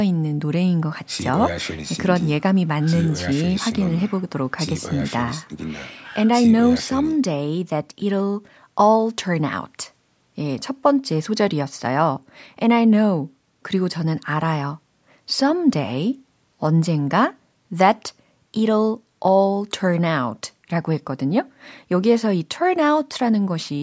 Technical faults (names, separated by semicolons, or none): none